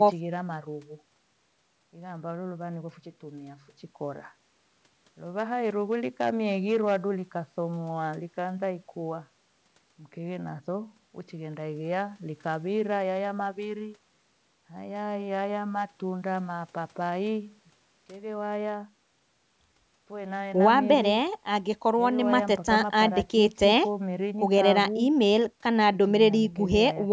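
From 5.65 to 6.96 s the speech shows hard clipping. Peaks overdrive a stage by about 6 dB and are cut flat, adding crackle on loud syllables.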